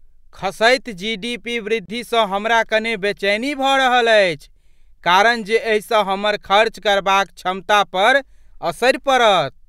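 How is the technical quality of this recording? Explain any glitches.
The speech has one glitch: a gap at a join of encoded pieces, from 1.86 to 1.88 s, between "खसैत जीडीपी" and "हमरा कने बेचैनी". A silence of about 29 ms opens mid-flow, with smeared edges. Two separately encoded sections were spliced untrimmed, leaving one encoder's start-up delay and the other's padded final frame in place. Unlike a dropout, nothing is lost: the speech resumes exactly where it stopped.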